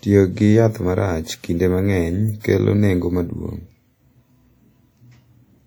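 Throughout the speech there is a washy, ringing quality with a hiss that rises and falls with the voice, likely from WMA compression. Its transform blocks smear quantisation noise over tens of milliseconds, and the plainly audible damage fits a bitrate around 48 kbps.

From 2.40 to 2.44 s, after "kinde mang’eny" and before "kelo nengo maduong’", pre-echo appears. Noise sized for a sharp attack late in the codec block spills about 40 ms ahead of it, so a brief hiss precedes the onset and softens its edge.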